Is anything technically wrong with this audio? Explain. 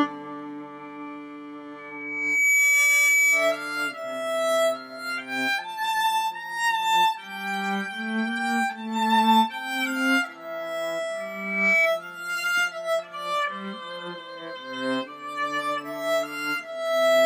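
Yes. Loudspeaker feedback squeal occurs at 1.78–3.67 s and again at 11.20–11.90 s. A microphone is picking up a loudspeaker that it feeds, and at 2.3 kHz the loop gain exceeds one, so that frequency reinforces itself on every pass. Each time a single 2.3 kHz tone swells out of the audio over less than a second, reaching roughly 10 dB above the wanted sound in the first event and roughly 5 dB in the second.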